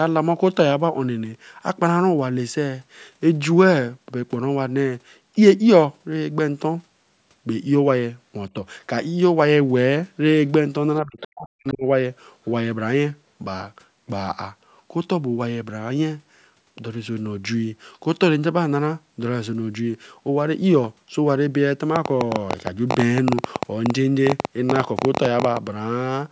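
From 11.01 to 11.85 s, the speech gets pulled down hard, by about 40 dB at its deepest, for roughly 0.7 s in total. That's speech suppressed in double talk. Both ends were talking, and the echo canceller likely couldn't separate the talker from the loudspeaker echo, so it ducked everything.

Inside that same stretch, the other side's voice leaks through twice. There's a short scrap at 11.2 s, about 15 dB under the speech, and a fainter one at 11.7 s, about 25 dB down. It's likely residual echo the canceller didn't fully scrub out of the microphone.

From 21.96 to 25.58 s there's a train of clicks, about forty of them at roughly 11 per second with uneven spacing, peaking about 15 dB above the signal. They're heard as a ragged ticking over the sound. The likely source is interference or a faulty connection injecting similar pulses again and again.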